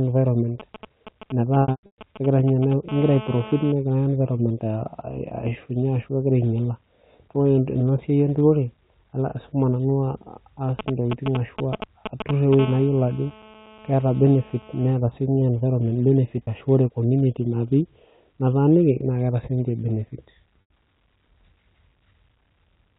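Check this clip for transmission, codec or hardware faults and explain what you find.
Three kinds of fault are present: interference from a nearby 2G phone in two forms, and packet loss concealed by pitch repetition. The narrowband telephone coding itself sounds intact.

GSM signalling bursts, from 0.60 to 2.73 s and from 10.79 to 12.55 s: a galloping dit-dit-dit of ticks and short buzzes. The first run sits well below the speech. The second is nearly as loud as it. A 2G phone was exchanging brief signalling bursts with its network, not carrying a call. The audio circuitry rectified each group of radio pulses, turning them into clicks and fragments of 217 Hz buzz.

GSM phone buzz, from 2.89 to 3.72 s at about 14 dB below the speech, and from 12.59 to 14.93 s at about 19 dB below: a hard, raspy, continuous buzz, rich in harmonics and unrelated to the speech. Here the phone was in a call, transmitting steadily 217 times a second. 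The rectified radio pulses became a constant 217 Hz tone with a harsh overtone series. At 12.59 s the buzz follows almost directly from the second stretch of signalling bursts.

Packet loss with pitch repetition, from 1.62 to 1.98 s, at 16.44 to 16.47 s, and from 20.63 to 20.70 s: brief held, buzzy sounds where the speech freezes on one tone. In the first region, 300 ms of audio goes missing in scattered pieces over 360 ms, the longest gap lasting 120 ms. These longer gaps fade toward silence before the speech cross-fades back, and they overlap the first signalling bursts. The 30 ms loss at 16.44 s is only a slight hold. The 90 ms loss at 20.63 s lasts long enough to fade toward silence before the speech returns. In each case the receiver lost packets and bridged the gap by repeating the last pitch period, fading it out over about 50 ms.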